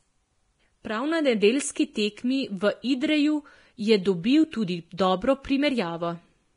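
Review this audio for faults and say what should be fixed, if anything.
Throughout the speech, the treble is hissy and grainy, with nothing above 10.6 kHz and roughened, smeared consonants. The likely cause is heavy Vorbis compression, with the residue quantised so coarsely that detail turns to noise, which fits a bitrate near 30 kbps. Encode at a higher quality setting or keep a lossless master.

At 4.97 s, right after "je dobil tudi", a brief hiss of about 17 ms leads into a sharp onset, softening its attack. This is pre-echo: quantisation noise sized for the loud transient spreads across the codec block into the quiet moment before it. A higher bitrate or an encoder with stronger block switching would prevent it.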